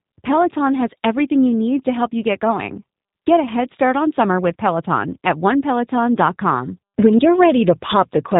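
The speech runs through G.729 codec damage from start to finish: nothing above 3.8 kHz survives, and voices take on a rough, buzzy, synthetic edge. Unlike simple band-limiting, the texture itself is rebuilt from pulses, which fits an 8 kbit/s G.729A coder.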